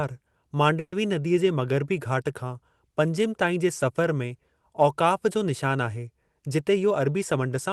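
At 0.79 s, packets were likely held up in transit and the jitter buffer ran dry, causing a call audio freeze that lasts until 0.94 s. The receiver stretched the last sound into a fading buzz or hiss that dies to brief silence, then resumed where it left off, adding about 130 ms of delay without losing anything.

From 6.43 s to 7.70 s, the jitter buffer had built up more audio than it targets, so the receiver trimmed short pitch-period pieces over and over. This jitter buffer speed-up runs the speech at 108% speed, same pitch, cutting roughly a tenth of a second and sounding hurried. Throughout, the call path's codec tops out near 12 kHz.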